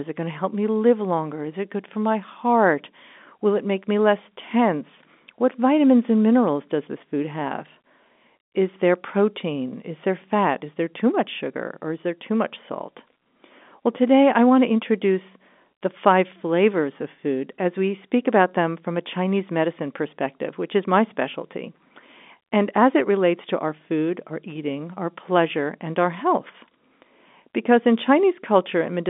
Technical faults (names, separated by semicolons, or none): none